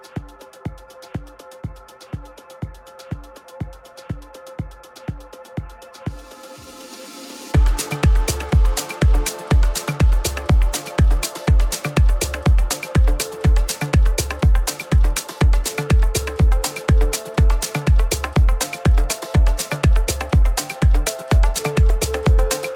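Near the end of the audio, between 21.59 and 21.62 s, the sound jumps abruptly forward with a brief blip at the join, as though a stretch of material had been cut out and the two sides butted together without any crossfade. The likely cause is a stream segment skipped: one chunk of the segmented stream failed to arrive or load, and the player moved straight on to the next segment, so that portion of the programme is simply missing.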